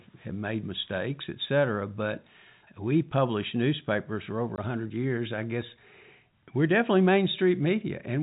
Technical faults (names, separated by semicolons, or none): packet loss filled with silence